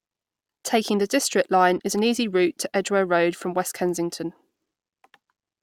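At 1.78 to 1.81 s, a corrupt frame decoded. Damaged bits from a couple of frames were played anyway, giving a brief, fairly quiet chirp, squeak, blip or burst of misplaced energy.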